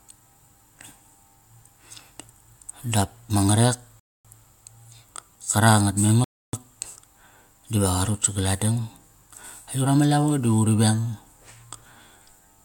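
A rebuffering stall hits at 4.00 s, right after "dap ma ngarek", and a second one at 6.24 s. In each case the player used up its downloaded audio and had to wait for more, so the speech drops to silence and then carries on from exactly the same point. Nothing is skipped. The pauses just stretch the clip, by 250 ms at the first stall and about 290 ms at the second.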